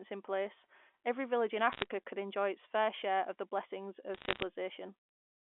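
Speech over a mu-law telephone line, with two bursts of sharp ticking crackle: from 1.72 to 1.86 s, between "place every village in" and "could enjoy its fair", and from 4.14 to 4.42 s, right after "share of the blessings". These are bit errors on a digital phone line. Each flipped bit corrupts a single sample, and hits on sign or high-order bits produce the loudest clicks. The density points to an error rate of around half a percent.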